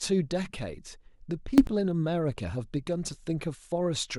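A sudden gain jump hits this speech clip from 1.58 to 1.67 s, where the level and the background noise leap together by about 18 dB. The step is likely a digital gain setting applied instantly, from one sample to the next, without any ramp.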